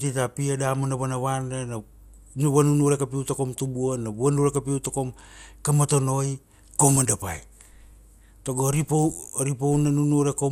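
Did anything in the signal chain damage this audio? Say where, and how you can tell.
Yes, the damage comes in at the codec stage, and it runs through the whole clip. The speech sounds dull and carries a gurgling, grainy texture, with the top end flickering in and out. That points to MP2 compression, likely at a rate around 80 kbps. At that rate there aren't enough bits to go round the 32 sub-bands, so upper bands get dropped now and then, and the remaining ones are quantised coarsely enough to churn.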